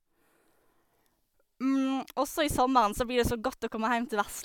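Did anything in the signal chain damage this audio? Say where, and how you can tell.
No, nothing in the signal chain audibly damaged this speech. No stage leaves a mark that points to a problem anywhere along the path.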